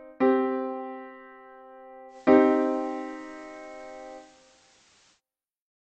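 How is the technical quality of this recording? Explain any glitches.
The recording has one clear glitch: a digital radio blending to analogue episode from 2.08 s to 5.21 s. At 2.08 s the receiver loses its digital signal and cross-fades, over about 110 ms, to the station's FM broadcast, returning at 5.21 s. During that stretch hiss rises to roughly 35 dB below the signal and the level shifts by about 2 dB. Unlike a dropout or codec fault, the sound never stops or smears; a quick blend brings in steady FM hiss that lifts away at the return.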